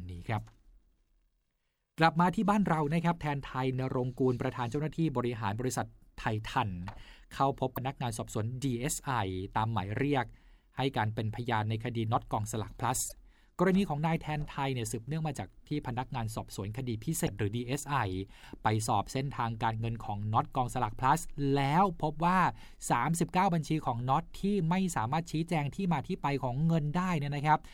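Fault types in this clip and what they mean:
broken MP3 bit reservoir: Frames were likely cut from the MP3 stream, so the frame following each cut reached back into the reservoir for its borrowed bits and decoded bytes belonging to some other frame instead. The speech skips ahead and each join comes out as a brief corrupted stretch about one to two 26.1 ms frames long, at 7.75 to 7.78 s, 13.08 to 13.12 s and 17.26 to 17.28 s.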